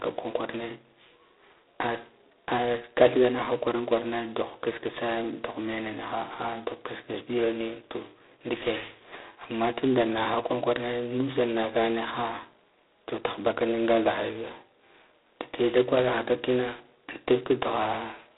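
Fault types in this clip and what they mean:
G.726 ADPCM: the speech is coded as coarse differences from a running prediction, consistent with 16 kbit/s, leaving a harsh rasping hiss that swells with its level. A spectrogram shows nothing above 3.8 kHz and grainy noise filling the speech bands; waveform peaks look fuzzy.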